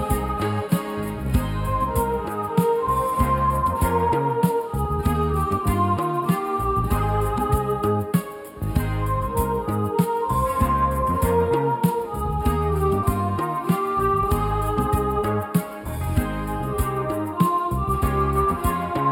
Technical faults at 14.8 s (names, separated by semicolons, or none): channel delay (comb filtering)